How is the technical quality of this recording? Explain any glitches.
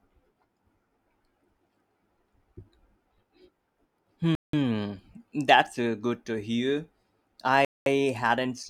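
The speech is interrupted twice by short dropouts, each most likely a Bluetooth stall. The first runs from 4.35 to 4.53 s, a silence of about 0.18 s, and the second from 7.65 to 7.86 s, about 0.21 s. Radio interference probably delayed packets until the headphones' buffer emptied, so playback halted and then resumed. Each gap sounds like an abrupt cut to dead silence. On a waveform it appears as a flat line, and on a spectrogram as a clean vertical blank band.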